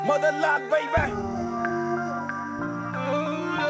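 No technical faults can be heard, and the sound carries the band limit of a WebRTC call path, with nothing above 8 kHz, which fits a wideband codec such as G.722.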